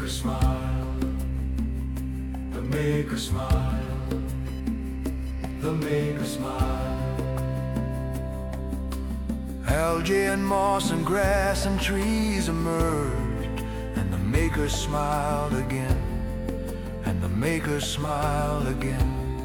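From about 2.65 to 6.0 s there's computer activity noise: a buzzy, chirping whine pulsing at around 1 kHz, sitting roughly 35 dB under the sound. The machine's changing load is rippling the shared ground into the audio path, so it tracks the computer, not the sound.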